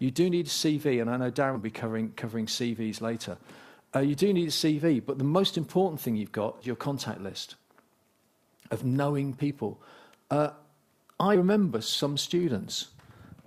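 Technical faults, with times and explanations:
1.55–1.58 s, 6.61–6.68 s, 11.35–11.39 s: compressed frames skipped. The audio jumps ahead roughly 100 ms, 150 ms and 100 ms, consistent with a few missing 20 ms frames.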